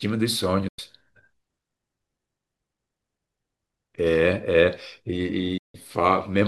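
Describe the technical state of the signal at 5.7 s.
A digital broadcast dropout runs from 5.58 to 5.75 s, so the signal is muted at 5.7 s. The receiver stopped getting valid frames and silenced its output, fading down over about 8 ms. Roughly 160 ms of speech vanishes before the sound resumes, which fits about five lost frames.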